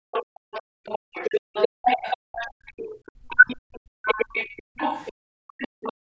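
From 0.12 to 5.93 s there's a faint second voice underneath, about 15 dB below the talker. It's most likely the other side's voice leaking through, loudspeaker sound the echo canceller didn't fully remove.

At 0.62 to 0.86 s the room sound plunges by about 40 dB. That's background gated by the echo canceller, which clamped the mic hard while the loudspeaker played, then let go.

At 1.27 to 1.35 s the talker briefly drops by roughly 35 dB. It's likely speech suppressed in double talk, with both sides speaking and the canceller ducking everything.

Between 1.69 and 2.99 s the background gating returns, cutting about 39 dB for roughly half a second in total.

At 3.27 to 3.46 s there's likely another double-talk dip, shallower at around 20 dB.

From 3.8 s to the end the gating is back, dropping about 40 dB across roughly a second. The call processing keeps everything below 8 kHz, which is expected.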